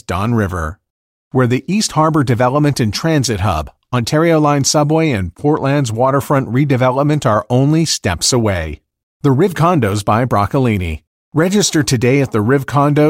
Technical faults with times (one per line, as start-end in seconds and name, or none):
none